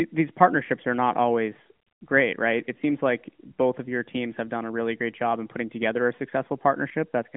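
Listening to this speech, with its narrowband mobile-phone character, nothing stood out as a technical fault.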